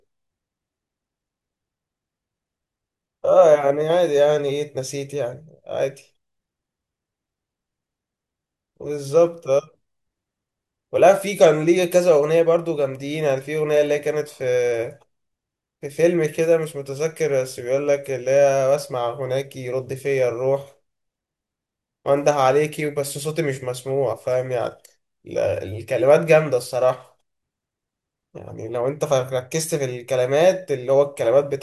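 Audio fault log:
No fault is heard in this audio.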